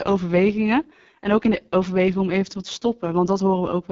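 From start to finish the speech carries the heavy damage of the AMR wideband (HD Voice) codec. The rough, raspy texture fits AMR-WB's lowest 6.6 kbit/s mode, where its pulse-driven vocal tract model has too few bits to rebuild the voice faithfully. On a spectrogram, harmonics look smeared and grainy below 6.4 kHz, a noisy band fills up to about 7 kHz, and nothing appears above 7.4 kHz.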